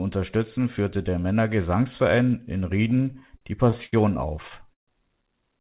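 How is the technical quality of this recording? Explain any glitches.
The speech is band-limited, with nothing above 4 kHz, which fits a G.711 call codec. Repeated stalls (stutter) occur from 2.9 to 3.93 s and again from 4.42 to 4.89 s. Packets arrived late, so the jitter buffer kept running dry. The receiver stretched the last sound to bridge each wait. Nothing is lost, but the speech drags and stutters. The second burst holds longer, up to 141 ms.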